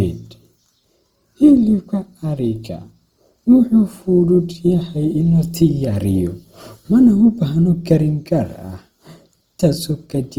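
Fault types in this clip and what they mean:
Opus compression: grainy, rough speech throughout, likely from Opus music-mode coding at around 24 kbps; the spectrogram shows noise-filled bands, few holes, and nothing above 20.3 kHz.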